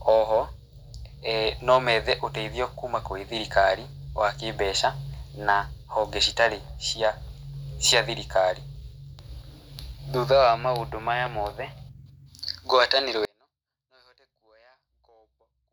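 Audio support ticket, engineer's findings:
Audio dropout to a faint residue from 13.25 s to end. Speech cuts abruptly, only a faint leak remains, roughly 35 dB down. Likely a lost source feed with the downstream path still live.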